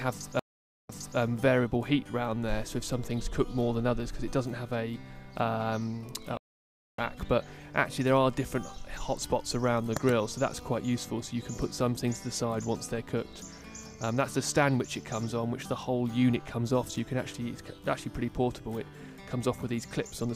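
At 0.39 s a stream reconnect drops the audio to silence for 0.5 s, then a fresh decoder picks up 0.3 s earlier, so a snippet repeats. At 6.37 s a second reconnect goes silent for 0.61 s and resumes roughly half a second later, skipping material. A plain dropout would not cause either the repeat or the skip.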